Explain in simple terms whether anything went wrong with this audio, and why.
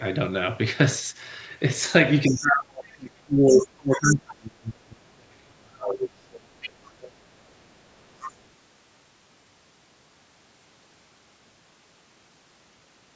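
Two problems are audible in this speech. The first is the other side's voice leaking through: scraps of a second voice appear at 2.25 s, 2.87 s, 3.49 to 3.63 s, 6.39 to 6.46 s, 6.62 to 7.12 s and 8.04 to 8.33 s. This is likely the loudspeaker's sound reaching the microphone without being fully cancelled.

The second is speech suppressed in double talk. From 2.28 to 6.25 s the main voice sinks, sometimes almost to nothing. Both sides were talking at once here, and the echo canceller likely turned everything down.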